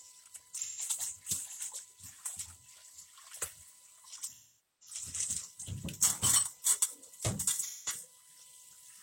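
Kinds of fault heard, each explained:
USB whine: A steady 1 kHz tone sits under the whole clip, roughly 40 dB below the sound. It's the USB bus pulling current in 1 ms frames, and that ripple leaks through power or ground into the analogue path as a fixed-pitch whine.
AAC frame loss with concealment: The decoder lost chunks of the stream and patched them from the last good spectrum, giving smeared, noisy stretches at 0.58–0.81 s, 4.28–4.96 s and 7.62–7.92 s. Those last about 128 ms, 469 ms and 171 ms, which fits runs of 3, 11 and 4 frames.
Audio missing between chunks: At 3.33 s there's a quick skip, roughly 20 ms, with the two sides butted together and no gap. It's likely the recorder dropping a sliver while switching from one block to the next, fitting 4 s blocks.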